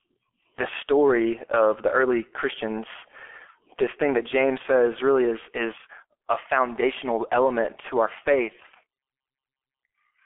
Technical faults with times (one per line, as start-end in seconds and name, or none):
0.00-10.25 G.723.1 codec